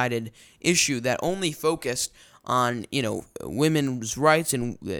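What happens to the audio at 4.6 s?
A DC step at 4.61 s: the waveform's zero line jumps by about -35 dBFS, then drains away through a 2 Hz high-pass, heard as a brief low thump.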